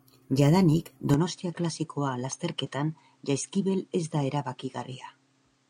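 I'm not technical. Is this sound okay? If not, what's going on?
No. At 1.14 s the speech suddenly changes character and stays that way to the end. It turns duller and a little quieter, with nothing above about 9.4 kHz, and a faint new background noise appears. There's no gap at the change. This pattern is most likely an input switched to a poorer device, meaning the recording moved from one microphone to another of lower quality partway through, such as a headset in call mode.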